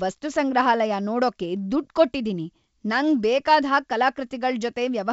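Nothing stood out on listening to this speech, which carries the band-limited but clear character of G.722 wideband telephone coding at 64 kbit/s.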